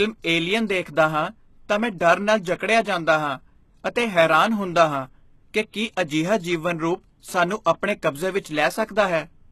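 From the start the speech has a gritty, metallic top end with nothing above 12.3 kHz, likely HE-AAC compression at a low rate, around 16 kbps. The treble is rebuilt from copied lower bands rather than coded, so sibilants come out gritty and lispy.

Then there's pre-echo: at 2.58 to 2.60 s, just before "ਜਾਂਦਾ ਹਾਂ ਅਤੇ ਹੈਰਾਨ"; at 5.72 to 5.74 s, right after "ਹੈਰਾਨ ਹੁੰਦਾ ਹਾਂ ਕਿ"; at 7.64 s; and at 8.86 to 8.89 s, after "ਸਾਨੂੰ ਆਪਣੇ ਕਬਜ਼ੇ ਵਿੱਚ". Each time, a brief hiss of 17 to 31 ms leaks ahead of a sharp attack, softening it.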